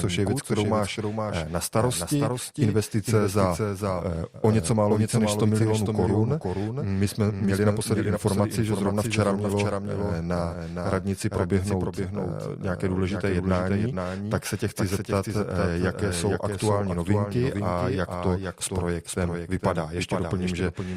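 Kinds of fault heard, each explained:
Doubled audio track: every sound in the clip is followed about half a second later by a second, full-band copy of itself, roughly 5 dB quieter, giving a distinct repeat that runs the whole length of the audio. The trailing copy carries no reverberant tail or room colouring, so it reads as a clean duplicate rather than an echo. The likely cause is the same signal reaching the mix twice, once through a slower capture path or an out-of-step edit.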